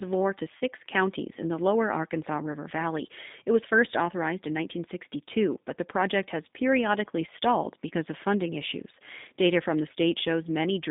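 Throughout, the speech carries G.729 codec damage: a rough, slightly synthetic texture typical of the 8 kbit/s class, with sound rebuilt from a vocal tract filter and a few pulses per frame. A spectrogram shows energy confined between about 150 Hz and 3.7 kHz, empty above.

From 0.57 to 0.61 s, VoIP packet loss concealed by the speech codec: about 30 ms of audio went missing, which fits one lost packet. The decoder stretched its last pitch and filter into a fading buzzy tone or coloured noise, seen as smeared, flattened harmonics and a decaying envelope before recovery.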